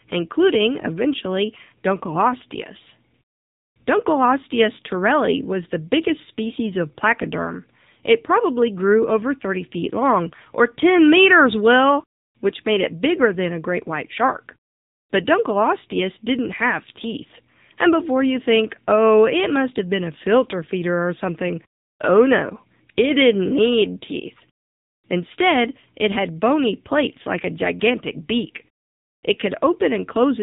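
From start to finish the speech has passed through the AMR narrowband mobile codec, and the damage is plainly audible. Sampling at 8 kHz leaves nothing above 4 kHz, so on a spectrogram the energy stops at a flat, hard ceiling with empty space above it. Each 20 ms frame rebuilds the voice from a vocal-tract model excited by a few pulses, and the strong buzzy, synthetic coloration points to a low mode of about 8 kbps.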